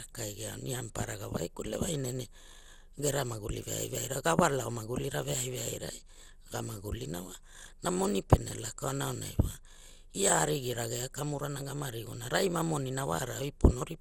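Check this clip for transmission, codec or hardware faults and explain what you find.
The speech carries generation loss from start to end. The sound is swirly, smeared and hollow throughout. Consonant attacks are blurred. Nothing is heard above 17.5 kHz. The likely cause is repeated lossy coding, around ten passes, with a character that points to MP2 at about 96 kbit/s. Each decode and re-encode quantises again on a shifted frame grid. Noise and spectral holes pile up, so the damage exceeds what one pass at that bitrate would leave.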